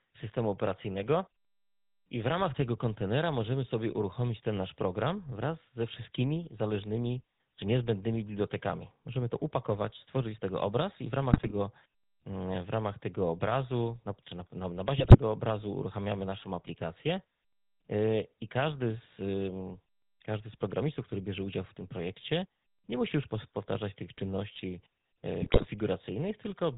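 It's a speech recording that's been through the old GSM full-rate codec from start to finish, and you can hear it plainly. There's nothing above 4 kHz, and the voice has that buzzy, gravelly grain because the codec rebuilds speech from a vocal-tract filter driven by a thinned-out train of excitation pulses, which fits the 13 kbps full-rate coder. On top of that there are three bursts of GSM bit errors. The first runs from 11.32 to 11.53 s, right after "tego obraz i w". The second runs from 14.98 to 15.17 s, between "czy na na na" and "obrazu uruchamiamy naszą aplikację". The third runs from 25.42 to 25.65 s. Each burst is a short spell of squawks and gargling, where corrupted filter, pitch and gain values reached the decoder and twisted the spectrum and level over several consecutive frames.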